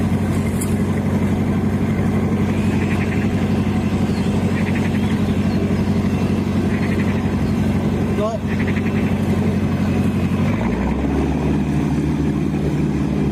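The audio shows gain pumping from start to finish: the level swings by about 10 dB, ducking under each loud sound and swelling back up in the gaps between them. The likely cause is input gain set far too high for the microphone, with a fast limiter or compressor pulling it down on every loud sound. On a waveform the envelope looks flattened, with loud and soft passages squeezed close together. A spectrogram shows the background brightening in each gap and dimming whenever a loud sound starts.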